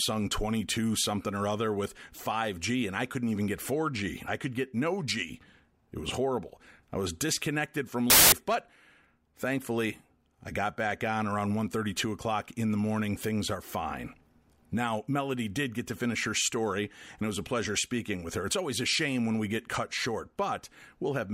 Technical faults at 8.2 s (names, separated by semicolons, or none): samples built from the wrong bytes